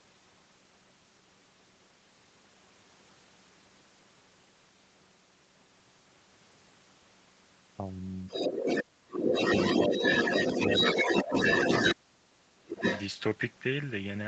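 Speech in which a second voice, the other side leaking through, appears at 8.28–8.83 s, 9.14–11.95 s and 12.72–13.03 s. It arrives at roughly the speech's own level, and somewhat louder in the long middle stretch, likely from a loudspeaker echo the canceller left behind. On a spectrogram a second set of harmonic stripes overlaps the main one. Speech is also suppressed in double talk at 8.31–8.35 s, 8.83–9.34 s, 9.77–9.95 s, 11.03–11.32 s and 11.95–12.84 s. It ranges from slight dips to deep drops of around 30 dB, likely because the echo canceller turned down both voices together. These show as collapsing waveform envelopes and faded, blank patches in the spectrogram, all within the 8 kHz band of the call path.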